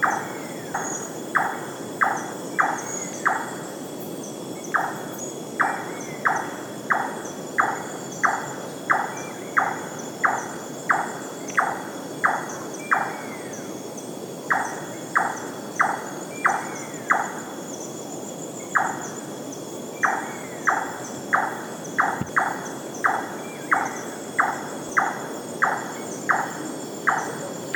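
Forward jumps occur at 0.74, 2.32, 5.20, 22.29 and 24.89 s, likely a dropped buffer (overrun): about a tenth of a second vanishes, a third at 5.20 and 22.29 s, leaving abrupt waveform splices and vertical spectrogram lines.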